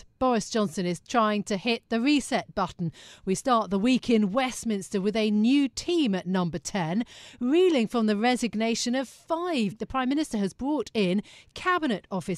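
A segment of the stream likely failed to load and was skipped, so at 9.71 s the speech jumps abruptly forward with a brief blip and missing material.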